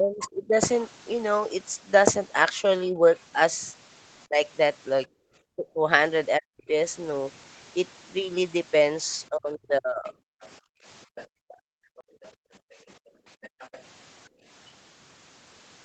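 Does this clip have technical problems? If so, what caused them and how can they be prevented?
Yes. Speech suppressed in double talk occurs from 0.0 to 0.59 s, from 2.89 to 6.73 s and from 9.29 to 10.13 s. The talker's speech sinks, by around 25 dB in the first and third stretches and around 40 dB in the second, and parts of it drop away. This is likely the echo canceller hearing both sides at once, failing to tell the near talker from the loudspeaker echo, and attenuating everything. A canceller with better double-talk detection, or a headset instead of an open loudspeaker, would prevent it.

The other side's voice leaking through is heard briefly from 0.21 to 0.25 s at roughly 15 dB below the speech. It returns from 10.07 to 13.82 s as a fainter trace, roughly 25 dB down. The far-end audio played from the loudspeaker likely reached the microphone and was not fully subtracted, so a residue of it survives in the recording. 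Using headphones, or lowering the loudspeaker volume and giving the canceller time to converge, would keep it out.

Background gated by the echo canceller appears from 5.08 to 5.27 s, where the room sound falls by about 22 dB for a moment. It happens again from 10.6 s to the end of the clip, with drops of about 38 dB. Whenever the loudspeaker was active, the canceller clamped the microphone hard, so the ambience vanished until it released. Gentler residual-echo suppression, or comfort noise to fill the gaps, would prevent it.

A CD skip occurs from 12.01 to 12.04 s, with a mute of about 30 ms. The speech then resumes from a different point. A knock or a disc flaw likely made the laser jump tracks on the spiral, and the player briefly silenced output and carried on elsewhere. Using a clean, undamaged disc on a stable, well-isolated player, or ripping it with error-checking software, would prevent it.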